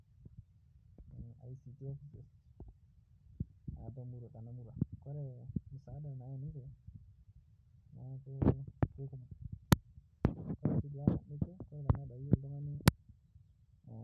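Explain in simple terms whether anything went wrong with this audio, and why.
Nothing went wrong with this speech recording.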